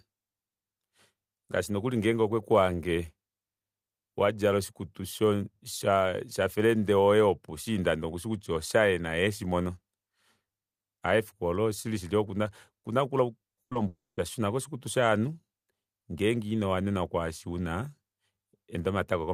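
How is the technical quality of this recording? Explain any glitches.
The speech is damaged by a cluster of network glitches between 13.55 and 14.19 s.

Short concealed packet loss occurs twice, at 13.55 to 13.59 s and 13.73 to 13.77 s. Each time about 20 ms of audio arrived too late. The receiver patched the hole by extending the preceding sound. It comes through as a brief smear or wobble.

A burst of packet loss sits between them, from 13.63 to 13.73 s. About 80 ms went missing in a row. The decoder stretched the last sound and faded it. A voiced moment turns into a short held buzz, and unvoiced sound becomes a dying hiss. The speech then jumps ahead.

A long network dropout follows from 13.87 to 14.19 s. The sound points to a likely stall in the connection. Of about 300 ms filled, the last sound is held and fades out, leaving roughly 210 ms of silence. The speech then returns further on, with that stretch lost.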